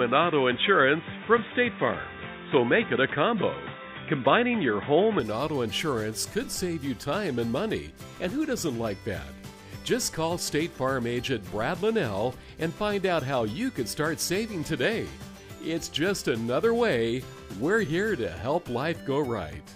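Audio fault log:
0.0–5.2 s, input switched to a poorer device: the sound is dull and boxy, with nothing above 3.8 kHz, a level a few decibels off and its own faint noise floor. It opens up at 5.2 s without a gap, likely a change of input device.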